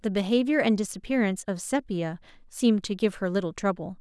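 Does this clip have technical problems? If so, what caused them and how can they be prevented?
No, there's nothing here that calls for a cause or a fix.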